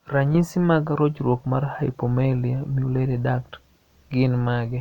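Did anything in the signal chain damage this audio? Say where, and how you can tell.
No, nothing in this speech recording stood out as damage from any stage of the signal chain when I listened to it.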